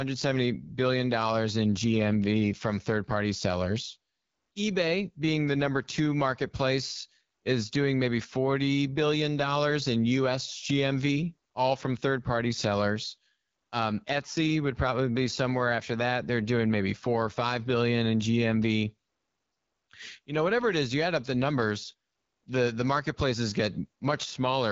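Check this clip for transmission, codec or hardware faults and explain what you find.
There's one fault, and it runs through the whole clip: AMR wideband (HD Voice) codec damage. The speech sounds plainly rough and raspy, since this codec rebuilds the voice from a pulse-driven vocal tract model, with noise filling the top band. Nothing comes through above about 7.4 kHz, and the coarseness fits the low 8.85 kbit/s mode.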